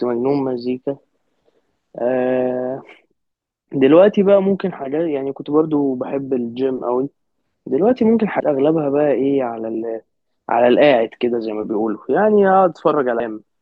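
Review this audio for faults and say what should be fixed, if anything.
Compressed frames are skipped at 8.40 s, 9.74 s and 13.20 s. The speech jumps ahead by roughly 150 ms, 100 ms and 300 ms, which fits losing whole 32 ms frames. On a spectrogram this appears as an abrupt vertical seam with misaligned harmonics, and the waveform shows an envelope discontinuity. To prevent it, verify file integrity and transmit with error protection or retransmission so that damaged or missing frames are recovered before decoding.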